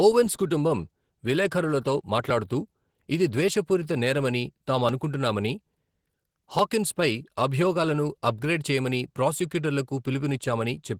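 Throughout the speech, Opus voice compression is plainly audible. The linear-prediction layer below 8 kHz codes the excitation coarsely, so the speech sounds hoarse and slightly robotic. Unlike a band-narrowing codec, it still reaches 20.3 kHz, which fits hybrid coding near 16 kbps.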